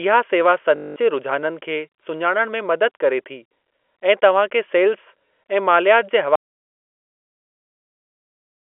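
A speech recording over a G.711 telephone-band line shows packet loss with the last packet repeated from 0.76 to 0.96 s, just before "जे रुझाननि". The 200 ms repeat, which fits roughly ten 20 ms packets, buzzes robotically and shows as identical repeating blocks on the waveform. An audio dropout to silence starts at 6.35 s and runs to the end, likely from a lost input. It appears as a flat, silent stretch with an empty spectrogram.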